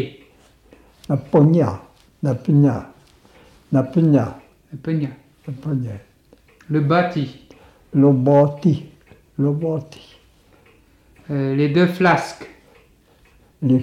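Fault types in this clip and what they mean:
No audible faults: nothing in the signal chain stands out as a defect.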